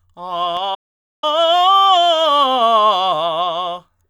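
Music, with a digital broadcast dropout from 0.74 to 1.24 s. The receiver stopped getting good frames and muted, so the sound ducks out over a very fast fade of about 8 ms into half a second of silence, then resumes further along, with everything in the gap lost. Unlike an analogue signal fading, there is no rising hiss or wavering first. Unlike packet-loss concealment, nothing is smeared or repeated to cover the hole.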